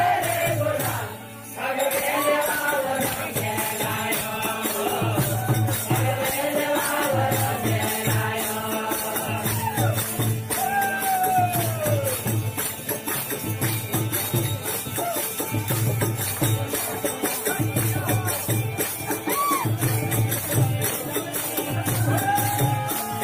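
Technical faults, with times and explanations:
Nothing here calls for a note, as there are no technical faults to be heard anywhere in the clip.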